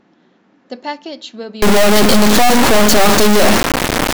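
An integer read as float fault takes over from 1.62 s to the end of the clip. The sound appears to have been stored as 32-bit integer samples and then interpreted as 32-bit floating-point values. Those bit patterns decode to numbers that are either close to zero or far past full scale, so the output lurches between silence and hard clipping. The speech turns into a harsh, very loud square-wave buzz that cuts out during the quietest moments.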